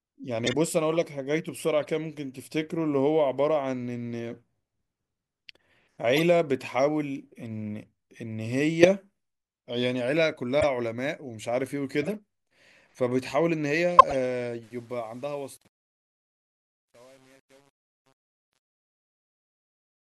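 Corrupt frames decoded at 0.45, 1.82, 6.16, 8.83, 10.60, 12.02 and 13.99 s in this speech clip cause short chirps and noise bursts where damaged compressed frames were played with wrong gains or codes, the last one the strongest. Truncation distortion on the fade, from 14.63 s to the end and worst after about 14.9 s, makes the closing fade-out gritty, because the level stage keeps too few bits (it sounds like about 8) and adds no dither.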